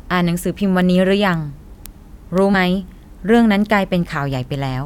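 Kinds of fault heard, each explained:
Word clock ticks: The speech passes through a digital link read by a receiver on its own clock, unlocked from the sender's, with a mismatch of roughly 100 ppm. Each time the clocks slip, one sample is dropped or repeated, giving ticks about every 0.3 s from 0.30 to 4.69 s, around twenty in all.
Compressed frames skipped: At 2.53 s roughly one compressed frame of 23.2 ms is not played, whether missing from the file or rejected by the decoder as damaged. About 20 ms of speech is lost, and the audio jumps ahead at the join.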